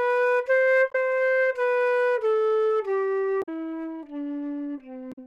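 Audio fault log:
0.88–0.95 s, 3.39–3.49 s, 5.09–5.18 s: damaged data in a compressed stream. Each time, corrupted bytes make the decoder misread its frames, lose sync and hunt for the next valid frame header, leaving a brief squawk or blip of roughly 80 to 100 ms.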